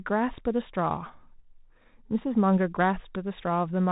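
From start to finish the speech carries the sound of a Bluetooth CVSD headset codec. Nothing above about 3.8 kHz survives, so the top end is simply gone. CVSD sends one bit per sample to step the waveform up or down with an adaptive step size, and the plainly audible damage fits a 64 kbps link: sibilants turn scratchy, fast loud high content outruns the step and distorts, and a granular hiss sits beneath the speech throughout.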